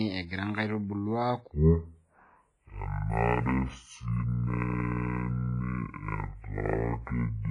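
From the very start the whole thing carries heavy codec damage, likely WMA compression: nothing above about 10.6 kHz, a ringing, washy smear and a hiss that breathes along with the speech, which fits an old WMA encoder at a low bitrate around 24 kbps.

Then at 1.52 s a section at the wrong speed kicks in and runs right to the end. Playback drops to 0.52 times the proper rate, so the speech turns deep and dragged, roughly ten semitones lower, likely from being clocked at the wrong rate.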